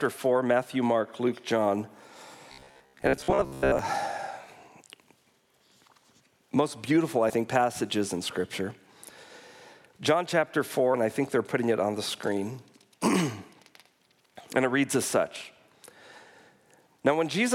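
From 2.52 to 3.79 s the sound goes robotic, a rigid metallic buzz pitched at about 67 Hz that still loosely tracks the shape of the audio underneath. That's the classic robotic sound from repeated short buffers. The likely cause is audio arriving too slowly, so playback keeps looping the last chunk of roughly 15 ms, which is why that fixed buzz shows up, while the real audio in between gets skipped. For most of that stretch you're hearing repeats, not fresh material.

Later there are two compressed frames skipped events, at 7.29 s and at 10.93 s. In each, a bit of the audio just goes missing and playback jumps ahead, about 50 ms at the first spot and around 70 ms at the second, which fits about two and then three 24 ms frames being dropped.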